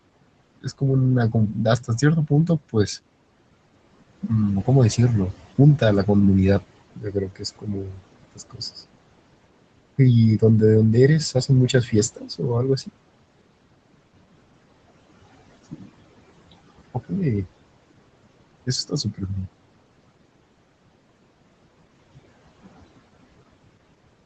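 Throughout the speech, noise suppressor artifacts are present: the suppressor pulls steady background down by about 21 dB frame by frame, so the noise floor dips between phrases and swells back under them. On a spectrogram the gaps look patchy and speckled rather than smoothly filled, with the whole picture stopping at 8 kHz from the call band limit.

From 6.95 to 8.05 s the noise suppressor cuts speech, mistaking about a second of it for noise and dropping it by up to about 22 dB. Further cuts follow at 8.35–8.62 s (about 19 dB), 12.15–12.41 s (about 17 dB) and 18.88–19.3 s (about 18 dB). Each sounds swallowed or faint, and the waveform shows sudden sags in the envelope with thinned, broken-off energy on the spectrogram.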